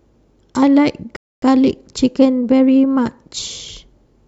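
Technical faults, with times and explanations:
1.16–1.42 s, rebuffering stall: the speech drops to dead silence for about a quarter of a second, then picks up exactly where it broke off with nothing skipped. The player exhausted its downloaded audio and paused until more arrived, adding 258 ms.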